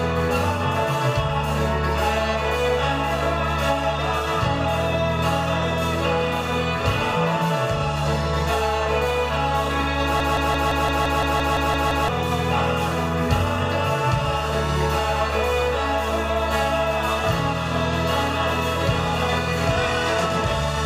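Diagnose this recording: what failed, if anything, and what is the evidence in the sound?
A 170 ms fragment repeats exactly, eleven times, from 10.20 to 12.09 s: a broken-record loop, likely a stalled playback buffer resending its last block.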